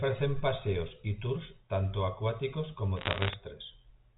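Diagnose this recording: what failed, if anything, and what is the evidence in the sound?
Bit errors on a digital phone line, at the transmission stage: flipped bits produce sharp single-sample ticks from 2.97 to 3.33 s, about one percent, over intact speech, unlike dropouts or clipping.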